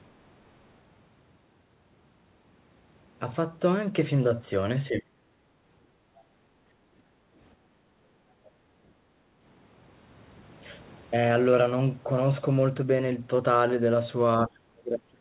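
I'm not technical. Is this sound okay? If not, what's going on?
No, there are a few problems, all from the call's echo control.

Speech suppressed in double talk: the voice suddenly sinks or nearly vanishes at 4.89 to 5.11 s, briefly at 7.56 to 7.62 s, and from 14.45 s to the very end, where it drops furthest. The likely cause is the other person talking at the same moment, so the call software turned the speaker down along with the echo. What sets this apart is that the voice itself is cut.

Background gated by the echo canceller: at 7.12 to 7.28 s and again for about a second from 7.9 to 9.17 s, the quiet room sound in the gaps dips down and then comes back. This happens while the far side is playing through the loudspeaker. Unlike the fault above, here it is the background between words that drops, not the voice, and the drop is milder.

Other side's voice leaking through: at 8.45 to 8.51 s a tiny, very faint scrap of a second voice slips in, likely the far person's voice from the loudspeaker that the echo control failed to remove. 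Unlike the other two faults, this adds sound instead of taking it away. It is very quiet and brief, so it is easy to miss.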